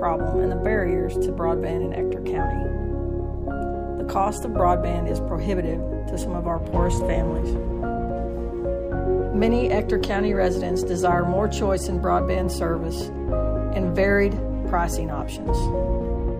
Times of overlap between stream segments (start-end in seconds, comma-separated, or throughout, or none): none